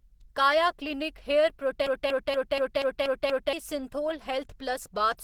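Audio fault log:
throughout: Opus compression. The speech has a hoarse, muffled, grainy texture that's plainly audible. That's the sound of Opus likely running in its hybrid speech mode at a low rate, something like 16 kbps, though content still reaches about 20.2 kHz.
1.86 to 3.53 s: broken-record loop. A 0.24 s fragment repeats back to back seven times, so the whole stretch sounds stuck and stuttering. Likely the player or stream stalled and kept resending its last piece, and the audio meant for that time is gone.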